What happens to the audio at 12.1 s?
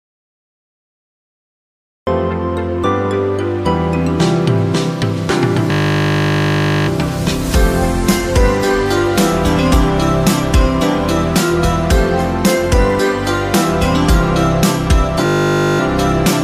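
Nothing goes wrong at 12.1 s; the audio there plays through intact, with no dropout, click, distortion or other fault.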